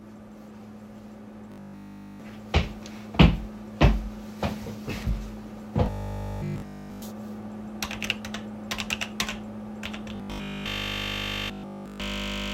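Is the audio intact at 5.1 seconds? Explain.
Yes, the audio is intact at 5.1 seconds, with no audible fault at that moment.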